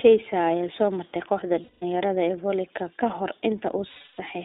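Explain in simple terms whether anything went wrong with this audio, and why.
The iLBC codec affects the whole clip. This is a phone-style speech coder that squeezes the sound into small 20 ms chunks, each packed on its own. It keeps only a narrow slice of pitch, roughly 250 Hz to 3.7 kHz, so the deep body and the crisp top of the speech are missing. What remains sounds thin and boxy, and the coding leaves a plainly audible rough, slightly synthetic edge on the voice.

Lost iLBC frames cause two short dropouts, from 1.64 to 1.84 s and from 3.90 to 4.20 s, lasting about 180 ms and 280 ms. Pieces of the stream went missing, and the decoder filled each hole by repeating the last bit of voice with some noise mixed in, letting it fade as the gap went on. The result sounds like a held, buzzy or breathy vowel. Because each chunk stands alone, the speech snaps back almost immediately afterwards.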